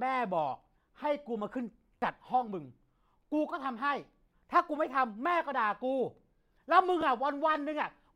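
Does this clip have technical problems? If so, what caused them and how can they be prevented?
Yes. A repeated buffer at 1.99 to 2.02 s and 7.01 s: new audio arrived late, so an 11.6 ms piece, which fits a 512-sample buffer, replayed three times, then once, as a brief buzzy stutter. Giving playback a larger buffer or higher processing priority keeps fresh audio arriving in time and prevents the repeats.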